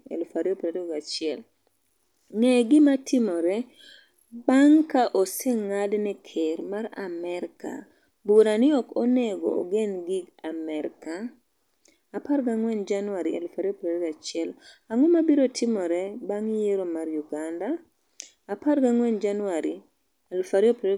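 Speech, with no technical faults to report. There are no times or causes to give.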